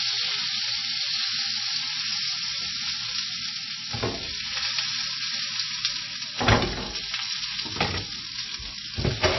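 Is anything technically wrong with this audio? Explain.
Yes. The whole clip shows MP3 compression damage, and it is plainly audible. Nothing comes through above about 5.8 kHz. The treble stops at a hard ceiling. The likely cause is an MP3 encoder short of bits, at a rate that points to roughly 23 kbps. At that rate the encoder drops the top band and zeroes weak frequency lines. Those lines flicker on and off between frames. The result is a watery, swirly texture with smeared attacks.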